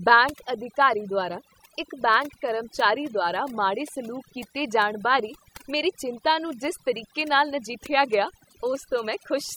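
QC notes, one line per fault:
throughout: overdone noise removal. The noise reducer is set too hard across the whole speech clip. Any frequency band that dips close to its noise estimate gets pulled far down or cut out, and the quiet parts of the voice are removed along with the hiss. What remains of the background is near silence broken by small twinkling artefacts, and the voice is short of its softer detail.
8.04–9.24 s: GSM signalling bursts, starting just after "ਜਿਸ ਤਰੀਕੇ ਨਾਲ ਨਜਿੱਠਿਆ". A nearby 2G phone in its signalling state sends short groups of radio bursts, and the audio circuit rectifies them into sound. The result is a galloping dit-dit-dit of short buzzes at the phone's 217 Hz burst rate, sitting roughly 25 dB below the speech. The pattern has no relation to the program material.
9.38–9.52 s: GSM phone buzz. For this short stretch the phone is transmitting continuously as in a call, so the bursts arrive steadily at 217 Hz. 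After rectification they come out as a hard, raspy buzz with many harmonics at about 26 dB below the signal. Because the pulses are evenly spaced, the fault has a fixed pitch and none of the ticking gallop heard in the preceding run.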